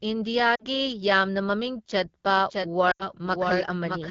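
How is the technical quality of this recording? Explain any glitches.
The recording is poor, with constant coding roughness and three distinct glitches.

Throughout, the speech sounds rough and raspy, with the top band turned to hiss. This is the AMR wideband (HD Voice) codec running at a low rate, which fits the 8.85 kbit/s mode. Unlike the dropouts, it is steady rather than momentary.

At 0.55 to 0.64 s and again at 2.91 to 3.09 s, there are lost AMR speech frames. The decoder repeats its last settings at falling gain, so the sound smears and fades, then returns rough. The first loss lasts about 40 ms and the second about 80 ms. They are brief, with no repetition of content.

From 2.29 s to the end, there is a doubled audio track. A full-band copy trails about 0.7 s behind and is roughly 5 dB quieter. It starts abruptly and has no room colour, unlike reverb. The likely cause is a second, slower capture path.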